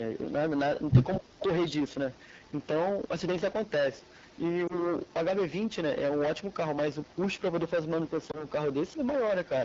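Hard clipping runs through the whole speech clip. The signal was driven about 14 dB past what a stage could pass, so a large share of peaks are sheared flat. On a waveform the tops look squared off. A spectrogram shows harmonic smear far above the voice, and it sounds like a harsh fuzz on every loud syllable.

The AMR wideband (HD Voice) codec at 8.85 kbit/s, one of its lowest rates, adds plainly audible roughness and rasp. The spectrogram shows detail fading above 6.4 kHz into a smooth noise band that stops near 7 kHz.

From 1.18 to 1.26 s the speech dips by up to about 15 dB, likely speech suppressed in double talk, where an echo canceller turned the talker down while the far side was also speaking. It appears as a brief notch in the waveform envelope.

Echo leak follows at 1.3–1.71, 2.12–2.67, 4.01–4.38, 5.07–5.13, 7.03–7.41 and 8.92–8.96 s. These are faint copies of the voice 230 ms late, about 25 to 40 dB down, likely residue a loudspeaker-side canceller failed to remove. 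On the spectrogram they show as faint, shifted ghosts of the speech.

Lost AMR speech frames hit at 4.68–4.75 and 8.31–8.45 s, each a single 20 ms frame. The decoder stretched the last good sound with falling gain, which gives a brief dip or warble. The spectrogram shows briefly frozen, blurred harmonics, with the voice returning weak or rough for a moment.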